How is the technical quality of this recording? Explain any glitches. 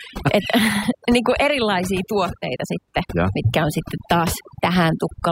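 The recording is marred by one problem running through the whole clip: overdone noise removal. From start to finish, a noise reduction process set far too aggressively pulls individual frequency bands down to nothing whenever they sit close to its noise estimate, taking the softer parts of the speech along with them. The result is a nearly silent background sprinkled with twinkling artefacts. On a spectrogram the gaps look unnaturally black, dotted with isolated bright specks, and the speech harmonics appear ragged and patchy; the waveform shows pauses flattened almost to zero.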